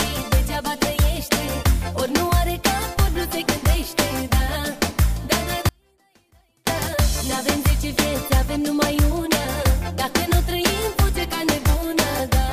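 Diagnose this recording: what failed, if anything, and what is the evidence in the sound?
What failed here is an audio dropout to a faint residue running from 5.69 s to 6.67 s, so just under a second of the wanted signal goes missing. It doesn't fade out or pause. It drops abruptly to a faint leak of the sound, around 35 dB down, then snaps back just as suddenly. Because the path after the break stays live, the culprit is likely an intermittent connection upstream, probably in the analogue wiring.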